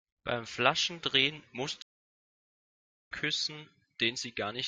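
A stream reconnect interrupts the speech at 1.82 s and leaves about 1.28 s of silence until 3.10 s. The connection dropped, playback stopped, and once the link was restored the player started a new decoder partway through the live stream rather than continuing where it left off. When the speech returns it has jumped ahead by roughly a second, so the stretch of audio that aired during the outage is simply missing.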